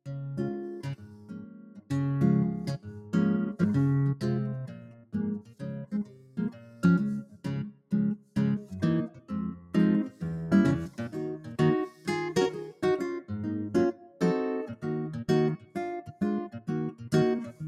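A speech-tuned noise suppressor has been left running on audio that is not speech, so it treats steady tones, ambience and decay tails as noise. Held material sinks while onsets come through, and the level swings by around 10 dB as the gain rides up and down. The result is a pumping, thinned-out character across the whole clip, with the processing audibly fighting the sound rather than cleaning it.

The sound is cut by the noise suppressor at specific points: 0.06–1.91 s, 2.78–3.14 s, 4.67–8.36 s, 9.09–10.22 s, 10.89–12.07 s, 13.93–14.21 s, 15.57–15.76 s and 16.57–17.61 s. In each stretch the sustained or fading parts are pulled down by about 7 to 10 dB at the deepest point, and tails are truncated. The longest damage falls in the 4.67–8.36 s span, where roughly two seconds of sound are attenuated.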